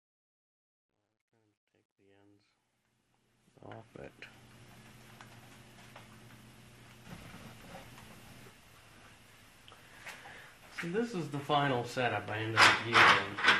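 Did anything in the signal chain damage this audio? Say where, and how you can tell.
Yes, two stages left marks. Across the whole clip the sound is plainly dull and gurgly, with a granular, watery grit on top. Upper bands seem to drop out and flicker back as the content changes. That's most likely MPEG Layer II (MP2) compression at a low bitrate, something like 80 kbps. The encoder splits the signal into 32 sub-bands and hands out bits. Starved bands get shut off outright, and the survivors are quantised coarsely, which produces that low-rate digital-radio character.

Separately, there's truncation distortion on a fade at the start, from 0 to about 4.64 s, worst between 0 and 3.05 s. The quiet part of the fade turns gritty and grainy instead of smoothly vanishing, which fits a 12-bit gain or fade stage with no dither. Near the bottom of that range the waveform only has a handful of steps to work with, so it collapses into square-ish staircases and the low-level detail becomes distortion.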